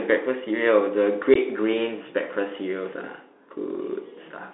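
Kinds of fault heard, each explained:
Bluetooth CVSD headset codec: The speech is squeezed into a narrow band of about 250 Hz to 3.6 kHz and coded at 64 kHz with one up-or-down bit per sample. The damage is plainly audible as scratchy sibilants and a granular hiss, unlike the warbling of perceptual codecs.
Unconcealed Bluetooth headset packet loss: Around 1.34 to 1.37 s, about 15 ms of audio, a couple of packets' worth, simply vanishes. Nothing fills it in, so the sound breaks off with hard edges into a short hole. A concealed loss would instead smear or repeat the sound across the gap.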